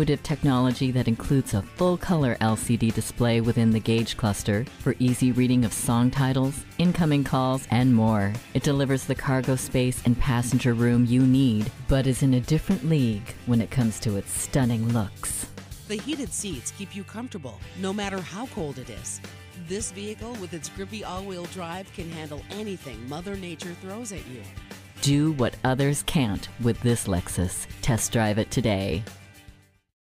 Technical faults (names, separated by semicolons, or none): none